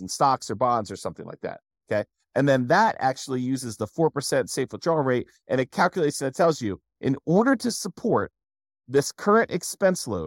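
Throughout the speech, one channel runs late by roughly 0.2 ms before the two are summed to mono, causing channel delay (comb filtering). Shared content cancels at fixed, evenly spaced frequencies, the first around 3 kHz, giving a steady hollow, phasey colouring.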